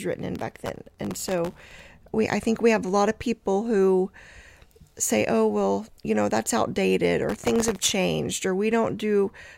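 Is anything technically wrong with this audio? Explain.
Yes, there's processor overload crackle from 0.36 to 1.87 s and again from 7.29 to 7.93 s. The processor keeps missing deadlines on very short buffers, under a millisecond, so stale audio gets replayed with hard edges. That's a gritty tearing riding on the speech.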